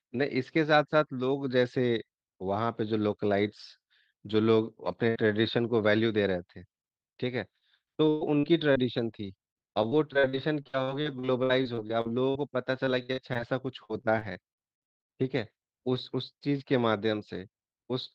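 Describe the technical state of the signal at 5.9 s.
At 5.9 s the speech signal is intact, with no dropout, clipping, glitch or other audible fault at that point.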